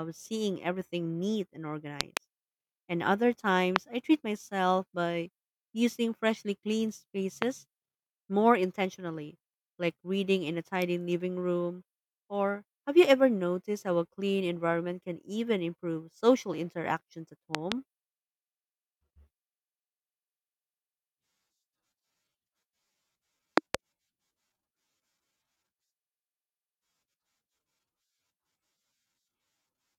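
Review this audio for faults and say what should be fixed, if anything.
Loud pops hit the speech at 2.01–2.19 s (a double), 3.76–3.78 s (just before "I treat myself by"), 7.42–7.44 s (after "by using freshly cleaned"), 17.55–17.74 s (a double after "improve social interactions at") and 23.58–23.77 s (a double). Each rises roughly 20 to 25 dB above the speech, which continues underneath. The likely cause is a voltage step from a plug, switch, static discharge or driver glitch, shaped by the downstream circuitry into a thump. On a waveform each pop appears as a tall isolated spike far above the speech envelope; on a spectrogram it is a thin vertical broadband stripe. Secure connectors and switches, ground the equipment, and update audio drivers to prevent them.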